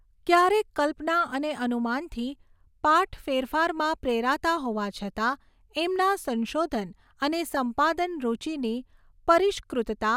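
From 7.54 to 7.57 s the speech is briefly hit by DAB burbling: weak reception let a small fraction of a percent of bit errors past error correction, corrupting the MP2 data so single sub-bands get short blips of noise. On a spectrogram this shows as isolated bright rectangular patches.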